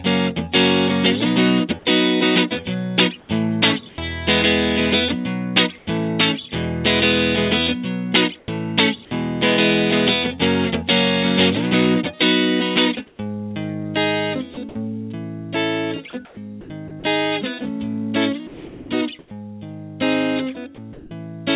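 From 3.2 to 5.87 s, the real background gives way to a steady, featureless hiss, likely comfort noise in place of the background after the sender stopped transmitting. Unlike ordinary noise reduction, the detail vanishes entirely rather than thinning.

At 3.95 to 3.98 s, about 30 ms of a sound's beginning is missing, so it starts abruptly. This is likely an onset clipped by the voice detector: transmission probably resumed a little late, whereas a dropout would cut mid-sound.

What is likely the same comfort-noise swap recurs from 8.39 to 8.48 s. There the background, sitting about 34 dB below the loud passages, drops by about 6 dB into smooth synthetic noise.

At 8.46 to 8.48 s, another onset is clipped, losing about 20 ms of its soft start.

From 13.07 to 21.11 s, the sound is chopped, likely by the voice detector switching on and off repeatedly. About 1.2 s in total is replaced. This differs from packet loss, which leaves gaps or smeared repeats rather than shaped noise.

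Throughout, nothing reaches above 4 kHz, which fits a narrowband G.711 call path.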